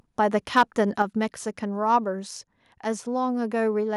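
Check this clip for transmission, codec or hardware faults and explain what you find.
Two faults are audible, both at the microphone input.

From 0.35 to 0.82 s there is microphone overload, likely from an input level set too high. Peaks push about 3 dB past the converter's ceiling, so roughly one percent of samples are sheared flat. The audio sounds harsh and crackly on the loudest syllables. The waveform shows squared-off tops, and the spectrogram shows high-frequency splatter.

At 1.02 s the microphone volume is stepped down by about 4 dB, likely the call software lowering input gain in response to that clipping. Speech and background drop together, abruptly. The waveform envelope shows a sudden step, and the spectrogram darkens uniformly across all frequencies.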